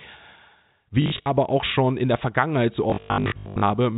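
Packet loss with last packet repeated strikes from 1.02 to 1.26 s and again, heavier, from 2.9 to 3.7 s. The receiver replays the previous packet across gaps of up to 100 ms, giving robotic stutters and a buzz that fits 20 ms packets, over narrowband G.711 telephone audio.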